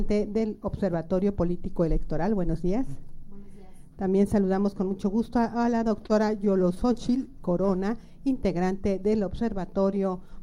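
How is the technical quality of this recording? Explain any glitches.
The recording has one glitch: repeated stalls (stutter) between 5.76 and 7.22 s. The sound drags and catches nine times, each hold up to 32 ms and about 110 ms in total, with nothing lost. Packets arrived late, so the jitter buffer kept running empty and the receiver stretched the last sound until data resumed.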